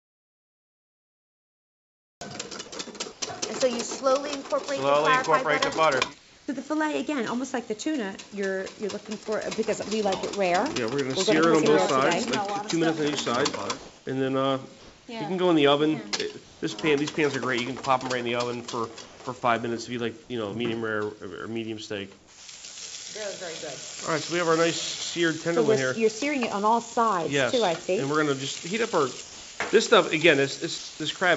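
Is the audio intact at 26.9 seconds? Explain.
No. From 26.94 to 26.96 s, sound dropped by the voice detector: it likely took the audio for background and stopped sending, so 10 ms gives way to brief comfort noise.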